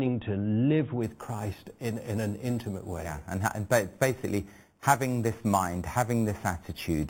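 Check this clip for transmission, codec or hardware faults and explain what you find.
One fault is present: imaging from sample-and-hold upsampling. It starts at 1.03 s, just after "to live", and lasts to the end. The sound fits an 8 kHz original raised to 44.1 kHz by holding each sample, with no smoothing filter. Mirror copies of the speech spectrum fold up around each multiple of 8 kHz. The first copy fills 4 to 8 kHz, about 17 dB below the speech. It is heard as a bright, metallic fizz that rises and falls with the voice.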